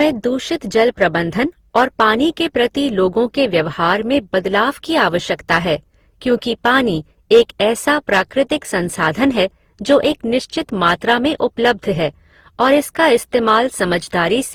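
Speech that sounds swirly, smeared and hollow from start to finish, with consonant attacks blurred. This is generation loss, likely from the audio being decoded and re-encoded with Opus about seven times, at a rate that fits around 48 kbit/s. A single encode at that rate would sound cleaner. Here each pass re-quantised on a shifted frame grid, so noise piled up. The band still reaches about 20.2 kHz, so the damage is texture, not lost treble.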